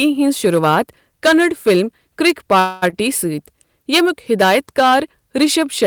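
Hard clipping runs through the whole speech clip: the level is driven about 12 dB past what the chain can pass, so a few percent of the samples hit the ceiling and are cut flat. Those squared-off peaks add high harmonics, heard as a harsh, gritty edge on every loud syllable.

At 2.30 s a sharp snap sits on top of the sound, an electrical switching spike. It is a brief transient that is not part of the speech, most likely a nearby switch or discharge arcing into the audio line.

From 2.59 to 2.84 s there is a call audio freeze. The last sound is held as a fading buzz for about 226 ms, then the speech resumes exactly where it stopped with nothing lost. That points to delayed packets likely draining the jitter buffer.

From 2.90 to 2.94 s comes a short stall from a late packet. A sound is held about 24 ms too long with a faint buzz while the receiver waits, then carries on from the same point, so nothing is dropped.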